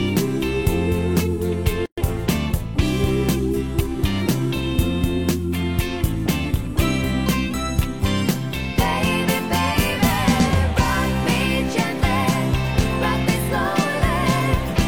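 At 1.86 s a gap at a join of encoded pieces drops in: roughly 120 ms of silence, encoder delay and padding left untrimmed, showing as a blank vertical band with smeared edges.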